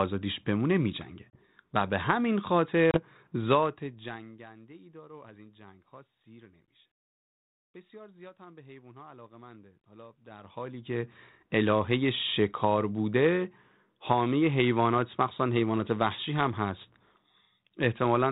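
At 1.30 to 1.38 s and again at 2.91 to 2.97 s there is packet loss on an ADPCM call. Each time, about 30 ms of audio, roughly three packets, drops out and is filled with silence. The waveform shows a flat gap with sharp edges, and the spectrogram shows a blank vertical band. When sound resumes, the decoder's predictor and step size no longer match the sender's, so the audio comes back slightly distorted. It settles within tens of milliseconds.

From 3.62 to 4.48 s there is zipper noise. The level drops by some 25 dB in 1 dB steps, about 50 a second, with no smoothing between them. Each step leaves a small discontinuity, which is heard as a fine ticking or zipping riding on the fade. The waveform envelope descends as a staircase rather than a ramp, and the spectrogram shows faint broadband vertical lines at a regular spacing through the fade. The underlying telephone-band coding, consistent with G.726 at 32 kbit/s, adds only light coding damage.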